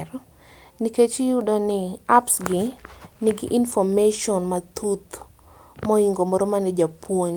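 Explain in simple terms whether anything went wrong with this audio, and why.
Nothing went wrong on the technical side of this speech recording: the signal stays steady and intact throughout, with no audible breaks or damage anywhere along the way.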